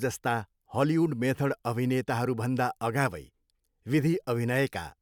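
No technical faults can be heard in this recording.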